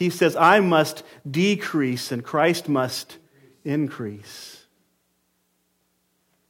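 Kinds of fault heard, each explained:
No faults turn up anywhere in this speech; it just runs along without a single glitch, dropout or distortion to point to.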